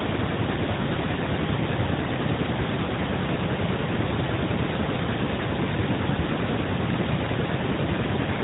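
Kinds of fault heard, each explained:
No technical faults heard.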